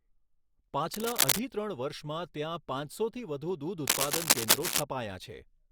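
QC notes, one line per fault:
0.94 to 1.39 s and 3.87 to 4.83 s, cable scratch noise: two bursts of dense, ragged crackle sit over the speech, the second just after "વર્ષમાં ત્યાં પાંચસોથી વધુ", and both run a bit louder than the talker. The sound is a scratchy rustle rather than clean clicks, which likely comes from a worn cable or connector being moved, its contact resistance flickering fast enough to spray uneven noise into the signal for as long as it's handled.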